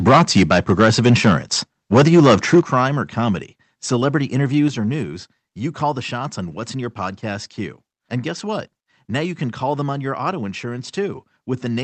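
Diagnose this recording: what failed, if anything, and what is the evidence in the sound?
Microphone overload at the converter stage: from 0.06 to 1.54 s and from 1.93 to 2.6 s the peaks are flattened, giving the loudest syllables a harsh crackle. The input runs about 10 dB past full scale, likely excess input gain, clipping roughly a twentieth, then a tenth, of samples.

Microphone volume stepped down in call processing: abrupt level drops at 0.09 s (about 2 dB), at 2.61 s (about 7 dB), just before "crime or comedy celebrity", and at 4.68 s (about 5 dB), before "or news you call". Software likely reacting to clipping cut the device's input gain in single steps.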